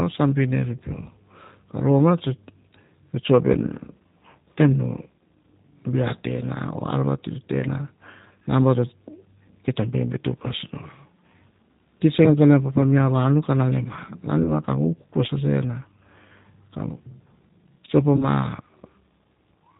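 Throughout, the speech sounds slightly rough and synthetic, with nothing above 4 kHz. This is plainly audible G.729 codec damage. The low-rate coder rebuilds each frame from a vocal tract filter, a pitch predictor and a few pulses, which fits an 8 kbit/s stream.

From 14.43 to 14.52 s and again from 18.17 to 18.27 s, the voice smears into a buzzy tone or coloured noise that fades, and stays weak briefly afterwards. This is VoIP packet loss concealed by the speech codec. Each gap fits one lost 20 ms packet. The decoder extrapolated from its last pitch and filter, and recovery lagged because every frame builds on the previous one.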